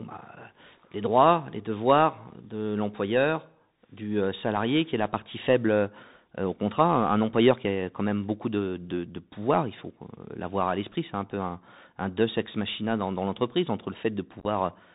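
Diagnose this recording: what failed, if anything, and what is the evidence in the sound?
Speech sounds narrow and scratchy throughout, with nothing above 4 kHz, gritty sibilants and granular hiss. This points to the codec stage: a Bluetooth CVSD headset codec whose adaptive one-bit step lags loud high sounds.

Brief crackling chop from 14.40 to 14.47 s, with abrupt holes totalling 41.2 ms over 60 ms, the longest 11.2 ms. This is unconcealed Bluetooth headset packet loss on the wireless link, with about ten short packets replaced by silence or an idle pattern.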